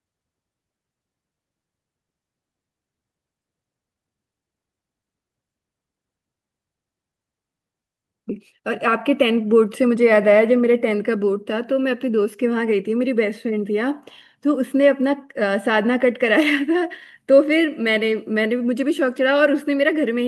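At 8.3 s the speech jumps abruptly forward, joined with no gap. This skip ahead dropped roughly 0.7 s of audio, discarded while later audio was already queued. From 8.38 to 10.12 s the speech runs hurried at unchanged pitch, about 7% fast. This jitter buffer speed-up trimmed repeated pitch-period slices, roughly 150 ms in all, to shrink excess buffered delay.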